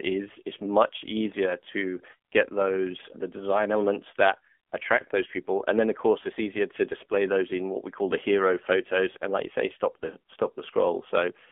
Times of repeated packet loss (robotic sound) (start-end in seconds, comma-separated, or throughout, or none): none